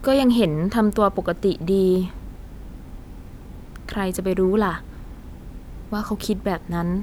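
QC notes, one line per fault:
No faults turned up here, just ordinary speech the whole way with nothing catching the ear.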